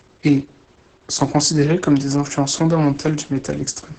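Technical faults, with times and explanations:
Throughout, Opus voice compression: the speech is muffled, hoarse and slightly robotic. The linear-prediction coder keeps only the broad vocal-tract shape and codes the excitation coarsely, at a level that fits a bitrate near 10 kbps. On a spectrogram, energy stops sharply at 8 kHz with an empty band above, and harmonics look smeared and blotchy in blocks consistent with 20 ms frames. The waveform looks rougher, with fine detail lost.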